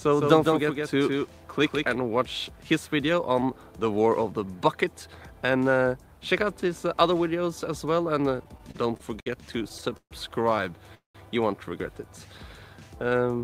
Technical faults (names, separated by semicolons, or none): doubled audio track; repeated stalls (stutter); call audio freeze